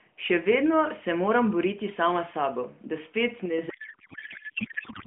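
A short speech clip carried over a narrowband AMR mobile link, with light codec colouring and nothing above roughly 3.4 kHz. Just after "sabo da spet", from 3.46 to 3.58 s, the level drops abruptly by about 5 dB, with the background noise falling in step. This is a sudden gain jump, likely a digital gain change applied between one sample and the next with no ramp. From 3.70 s to the end, the speech gives way to garbled noise and warble that barely tracks it. This is a codec payload misread: octet-aligned AMR frames are being parsed as bandwidth-efficient, so the decoder accepts valid-looking frames but pulls every field from the wrong bit position.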